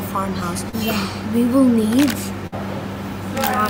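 A received audio stream with two packet-loss defects. At 0.69 to 0.75 s there is a short concealed packet loss: roughly 40 ms of audio failed to reach the decoder in time, and the receiver bridged the hole with about 33 ms of synthesised continuation extrapolated from the preceding sound before crossfading back into real signal. It is heard as a brief smear or wobble in place of the lost material. At 2.47 to 2.54 s a burst of packet loss removes about 60 ms, consistent with several consecutive packets dropped or arriving too late for playout. Concealment extends the last sound for about 52 ms while attenuating it, producing a held, fading continuation rather than the original content. Playback then resumes further along the stream, so the audio between those points is absent.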